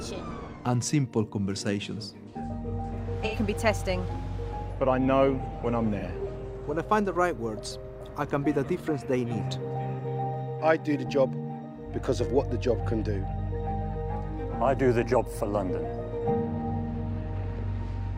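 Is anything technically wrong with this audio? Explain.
Yes. At 3.25–3.36 s, 5.98–6.05 s and 9.99–10.06 s the sound briefly turns smeared and noisy, the first patch longer. This is AAC frame loss with concealment: about 85 ms, then about 43 ms twice, consistent with two frames and then single frames dropped, with the decoder rebuilding each gap from the last good spectrum.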